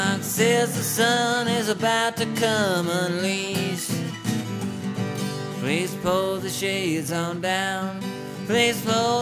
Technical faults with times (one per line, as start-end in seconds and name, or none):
none